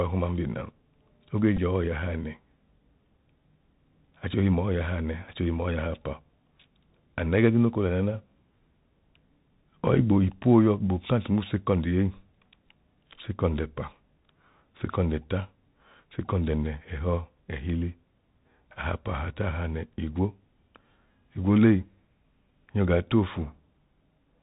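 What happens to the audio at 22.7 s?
At 22.7 s the speech is still passing through the Bluetooth CVSD headset codec, as it does for the whole clip. The one-bit delta coder, consistent with a 64 kbps CVSD link, removes everything above 4 kHz, roughens s sounds and leaves a granular hiss underneath.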